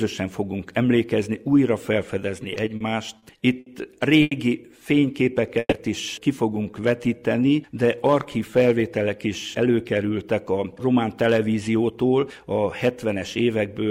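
From about 2.43 to 2.82 s there's a run of repeated stalls, a stutter. Packets kept turning up late, so the jitter buffer ran dry four times in under half a second. Each time the receiver carried the last bit of sound forward, about 70 ms of fill in all, the longest gap about 40 ms. Nothing's actually lost, but nearly a fifth of that stretch is patched, so it catches and drags.

Right after, there are three separate short stalls from a late packet, at 3.18 s, 3.60 s and 4.22 s. Each time a packet missed its slot, the buffer emptied, and the receiver held the current sound until it arrived, then picked up where it left off. The holds are 40, 60 and 90 ms, so they get more obvious as they go: a sound hangs a beat too long, with a faint buzz or dip.

There's a jitter buffer slow-down from 5.00 to 5.54 s, and a second from 6.71 to 7.49 s. The buffer was running low or had just raised its target delay, so the receiver rebuilt its reserve by repeating tiny pitch-period-sized pieces over and over. 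The first adds about 40 ms and plays at 94% speed. The second adds 83 ms at 91%. The pitch stays put, but the sound stretches out, and the second one is more noticeable.

Wedged between those, from 5.59 to 5.74 s, is a call audio freeze. The sound holds and fades out over about 130 ms, the last 30 ms or so dropping to silence, then resumes from exactly where it stopped. That fits packets likely held up in transit long enough for the jitter buffer to empty. Nothing's cut out, but a small gap has been pushed into the flow.

Finally, from 9.26 to 12.26 s, there's a jitter buffer speed-up. The buffer held more audio than it aims for, so the receiver trimmed short pitch-period chunks over and over to claw back the latency, taking out somewhere around a third of a second over those three seconds. Playback runs at roughly 109% speed at unchanged pitch, and it sounds noticeably hurried.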